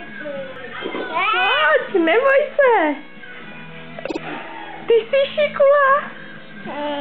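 Repeated frames occur at 4.06 to 4.17 s: a block of about 52 ms is played two extra times, which fits a couple of compressed frames being sent again. The sound stutters, and the clip gains about 105 ms.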